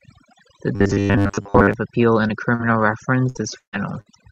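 Speech taken from a noisy recording went through overdone noise removal, where a noise reduction stage set far too aggressively pulls individual frequency bands down or off whenever they sit close to its noise estimate. The softer parts of the voice are caught along with the noise. Throughout the clip the background drops and breaks up into twinkling specks. From 0.76 to 1.74 s there is robotic sound from repeated short buffers. The playback side was likely starved of fresh audio and kept replaying a short chunk, with about 70 percent of the audio in that span being repeats rather than new material. That replay imposes a steady buzz at 100 Hz, which fits a chunk about 10 ms long. The voice becomes a rigid, metallic drone that only loosely tracks the speech. Two cases of short concealed packet loss follow. At 2.27 to 2.31 s about 20 ms never reached the decoder and was covered with 14 ms of extended sound. 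At 2.55 to 2.61 s about 40 ms was lost and bridged with 43 ms of fill. Each is heard as a brief smear or wobble where the receiver stretched the preceding sound before blending back into the real signal. Then come three bursts of packet loss, where longer runs of audio arrived too late or not at all: 60 ms at 3.29 to 3.37 s, 140 ms at 3.59 to 3.75 s, and 60 ms at 4.01 to 4.08 s. In each gap the receiver continued the last sound while turning it down, so it becomes a held buzz or fading hiss. The middle gap sinks to silence for about 120 ms. The speech resumes further on with the lost stretch simply gone. The call path itself, an Opus codec, is audible in the high frequencies stopping near 8 kHz.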